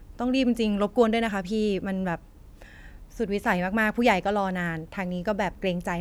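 No dropouts, clicks, distortion or level jumps turn up anywhere in the speech, and no technical faults are audible.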